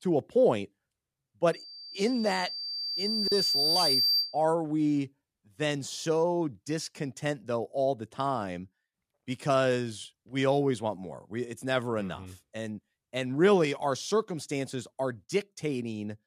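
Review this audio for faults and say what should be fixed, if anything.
Loudspeaker feedback squeal runs from 1.53 to 4.45 s, ending just before "we then so discontent". A single tone at 4.7 kHz swells over roughly two seconds until it sits about 5 dB above the speech. The microphone is picking up the loudspeaker it feeds, and at 4.7 kHz the loop gain exceeds one, so that frequency keeps reinforcing itself around the loop until the loop is broken. To prevent it, lower the monitor gain, keep the microphone out of the loudspeaker's coverage, or notch 4.7 kHz.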